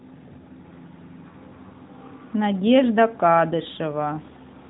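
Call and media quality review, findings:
No faults found in this speech clip. The AMR narrowband mobile codec path is audible as a band limit with nothing above about 3.8 kHz and only light codec colouring, which fits AMR-NB at its 12.2 kbps mode.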